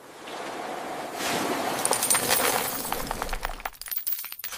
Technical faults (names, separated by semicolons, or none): none